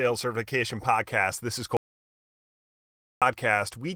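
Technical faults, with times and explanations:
1.77 to 3.22 s, audio dropout to silence: the speech cuts off abruptly and about 1.45 s of silence follows, with no room tone underneath, before it snaps back. That points to the input being lost, likely a disconnected or muted source, with silence written meanwhile.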